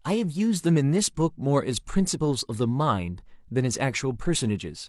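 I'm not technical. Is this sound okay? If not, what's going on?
Yes, no technical faults are audible anywhere in this speech recording.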